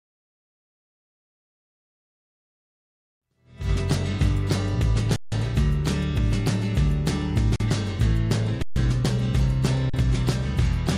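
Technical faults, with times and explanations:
5.16–5.32 s, 7.56–7.60 s, 8.62–8.76 s and 9.90–9.94 s, underrun with held sample: the output buffer ran dry four times, for 160 ms, 40 ms, about 136 ms and 40 ms, and the converter froze on its last value. The waveform sits flat, so the sound stops with little or no click. No audio was skipped, and playback picks up where it halted, so each restart is soft.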